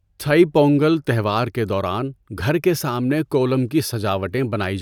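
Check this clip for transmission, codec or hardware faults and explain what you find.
Nothing jumps out here: the speech comes through steady and intact, with no transmission, codec or hardware trouble to point to.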